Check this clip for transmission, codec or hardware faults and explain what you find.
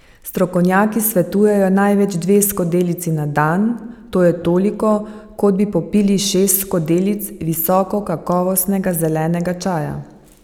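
Nothing to report: no faults found anywhere in the speech.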